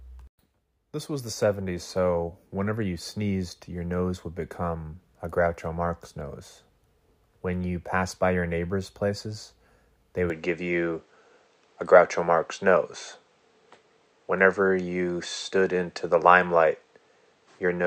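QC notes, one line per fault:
10.30–17.87 s, input switched to a poorer device. After "your neighbors' places they", the speech turns dull with nothing above 8.4 kHz. Level shifts by roughly 5 dB. A faint new noise floor appears. No gap marks the switch. Likely another microphone took over.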